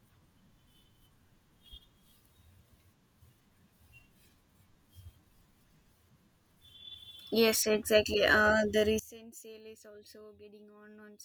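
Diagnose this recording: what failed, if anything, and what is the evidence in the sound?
One channel inverted, 8.99–11.24 s: speech falls about 24 dB as mono summing cancels the centre, likely from a polarity swap in analogue wiring.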